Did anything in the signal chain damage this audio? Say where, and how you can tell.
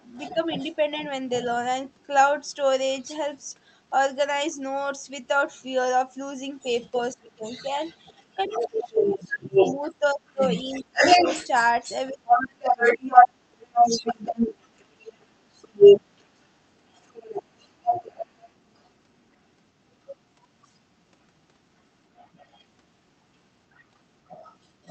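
Yes. A second voice, the other side's voice leaking through, sits under the speech at 0.0–1.06, 1.98–3.41, 6.6–19.64, 20.65–22.65 and 23.7–24.9 s. It is faint in most spans but about as loud as the talker through 6.6–19.64 s. The likely cause is residual echo left by call-processing echo cancellation. Unlike reverberation, it is a separate talker rather than a smeared copy.

Speech suppressed in double talk shows as brief dips of about 5 dB at 0.34–0.71 s and around 3.05 s, then deep cuts of roughly 25 dB, some three seconds in total, within 7.16–13.09 s while the leaked voice overlaps. This is likely the echo canceller ducking everything. Unlike network dropouts, the cuts follow the overlap.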